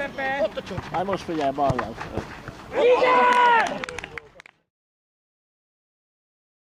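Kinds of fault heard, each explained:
No faults heard; the only level change is a deliberate fade-out from about 3.5 s to 4.7 s, smooth with no click or hard edge.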